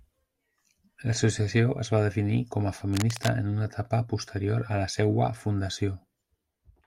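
At 2.93 s, running to 3.29 s, there's a burst of cable scratch noise, a rough, uneven scratching sitting over the speech about 10 dB down. It's likely a worn cable or connector being moved, its contact resistance jumping around for that third of a second.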